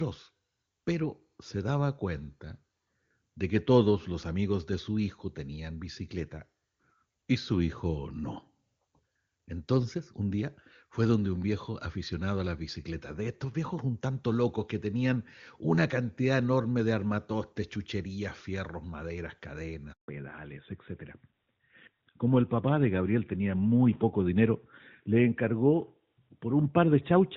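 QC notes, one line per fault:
19.92–20.08 s, handover gap: after "armatostes chucherías fierros maderas" the sound fades within milliseconds into 160 ms of silence as the call switches networks, unlike a click-edged dropout.
20.08–27.36 s, fallback to narrowband: the call drops from clean HD Voice to a narrowband codec. Nothing remains above 4 kHz and the sound turns duller and rougher, which fits AMR-NB at 12.2 kbit/s. The change is a permanent step, unlike a gradual filter sweep.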